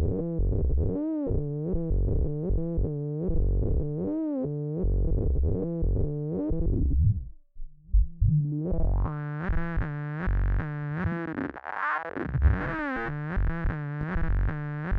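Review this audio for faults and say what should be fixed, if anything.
A single loud pop sits near the end, from 14.01 to 14.05 s. It is a sharp, brief thump laid over the sound, which continues underneath. It peaks a few decibels above the surrounding audio. The likely cause is a sudden voltage step entering the chain, such as a plug being seated, a switch being thrown or a static discharge. The stages after it shape that step into the audible pulse. To prevent it, keep connections and switches untouched during recording and ground the setup properly.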